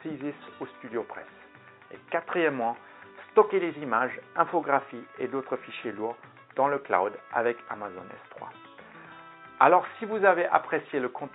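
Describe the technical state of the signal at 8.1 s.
At 8.1 s the signal is intact, with no audible fault at that moment.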